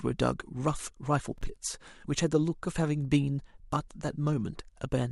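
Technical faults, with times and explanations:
1.26 to 1.57 s, processor overload crackle: the speech picks up a gritty, tearing crackle for about a third of a second, as the processor falls behind and drops a string of tiny buffers, around 3 ms each, into silence with hard edges, then catches up.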